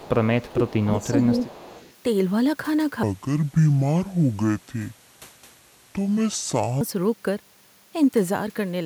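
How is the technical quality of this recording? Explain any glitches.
The recording has clear technical problems: a faint returning echo, dips in the talker's level, and one long stretch of speech played too slowly.

Echo leak, at 0.00–0.09, 0.42–0.52, 1.04–1.08 and 1.38–1.94 s: a loudspeaker echo likely slipped past cancellation, returning a copy of the speech 353 ms late, about 20 to 25 dB quieter.

Speech suppressed in double talk, between 0.49 and 1.41 s: the canceller likely turned down overlapping speech, so the talker dips by up to about 15 dB, in pieces totalling roughly 0.7 s.

Section at the wrong speed, from 3.03 to 6.81 s: this section plays at 0.619 times normal speed, so the speech sounds slow and deep, about seven semitones lower.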